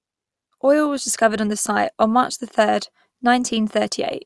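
Nothing in the recording stood out as a technical fault on listening.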